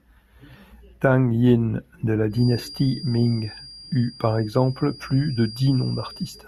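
A speech recording with a thin, steady feedback whistle near 4.8 kHz from 2.29 s to 6.48 s, well below the voice and swelling and fading slowly in level, likely a speaker-to-microphone loop sitting just at the feedback point.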